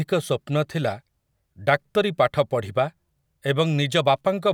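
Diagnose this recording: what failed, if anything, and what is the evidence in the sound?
Nothing failed, and the sound gives no evidence of a fault anywhere in the recording chain.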